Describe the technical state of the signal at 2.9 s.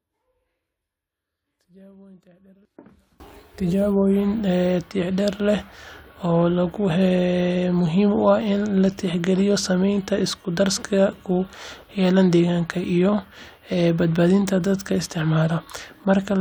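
At 2.9 s the speech is almost gone when heard in mono: the centred voice and its low end have largely cancelled, dropping about 26 dB and leaving only a faint residue of what differs between the two sides. This holds from the start of the clip to 3.20 s. The likely cause is one channel inverted: one stereo side has reversed polarity, so the identical centred content subtracts itself out on summing.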